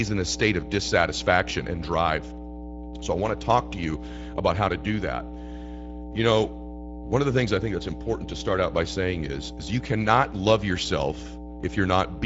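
A steady, low 60 Hz drone sits under the speech for the whole clip, loud enough to compete with it at only about 10 dB below the speech level. This is mains hum: the power line leaks into the signal path, most often through a ground loop between connected equipment or from a transformer close to the cabling, and leaves a constant tone at the supply frequency. The speech itself sounds grainy and hoarse throughout, with plainly audible coding damage, and there is nothing at all above 7.7 kHz. That combination points to the Speex codec, the speech codec used in older VoIP and game chat, working as a wideband coder at a modest rate that fits roughly 17 kbps. At that rate the excitation signal that drives the speech model is coded with too few bits, so the speech loses its clean texture and takes on a rough, noisy character.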